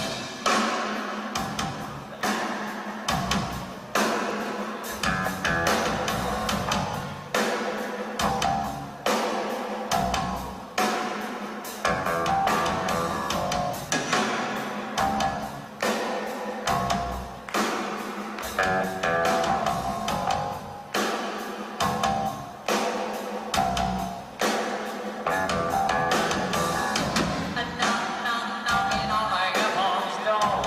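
Nothing in the audio stood out as a technical problem on listening.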